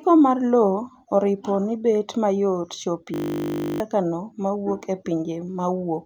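At 3.14 s the speech locks into a system hang loop until 3.8 s. The system stalled while the hardware kept replaying one 20 ms piece of its ring buffer. This repeats 33 times as a steady 50 Hz buzz. Roughly 0.7 s of speech is lost.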